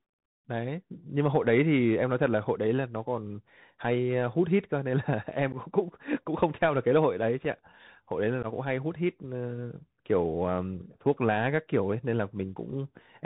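The whole speech clip runs through a Bluetooth CVSD headset codec, which fits a 64 kbps link. Its one-bit slope tracking leaves a grainy hiss and scratchy sibilants, and the damage is plainly audible. On a spectrogram the energy stops at a hard ceiling near 4 kHz.

Unconcealed Bluetooth headset packet loss punches three holes where lost packets became silence or an idle pattern: at 5.52 s (11.2 ms, a few packets), at 7.45 s (3.8 ms, a single packet) and from 8.43 to 8.46 s (11.2 ms). Each sounds like an abrupt click or dropout, seen as flat gaps in the waveform and thin vertical stripes on the spectrogram.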